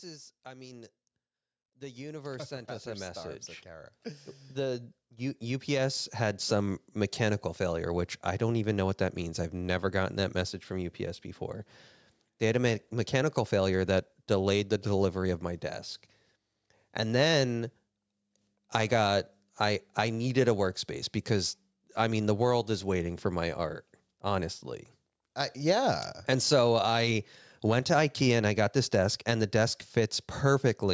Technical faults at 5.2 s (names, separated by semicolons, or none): automatic gain rising